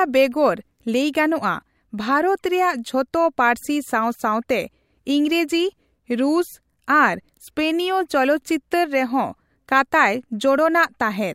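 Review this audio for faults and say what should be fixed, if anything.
No faults found in the speech and nothing needs fixing.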